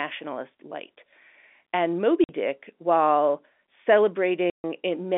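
Speech over a G.711 telephone line, band-limited to roughly 250 Hz–3.5 kHz, shows packet loss filled with silence: hard-edged dropouts at 2.24–2.29 s (50 ms) and 4.50–4.64 s (140 ms). Both gaps are multiples of 10 ms, which fits 10 ms packets replaced by silence.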